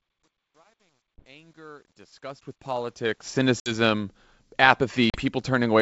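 From the start to 3.49 s the speech fades in, but the quiet part sounds gritty, worst up to 2.29 s. That's truncation distortion on a fade: the gain stage keeps too few bits (fits about 11) with no dither, so low levels turn into coarse steps.

Then there's packet loss on an ADPCM call: hard gaps of 20 ms at 1.18 s, 60 ms at 3.60 s and 40 ms at 5.10 s. After each one, the decoder's predictor is out of step, so the sound comes back slightly distorted before it settles.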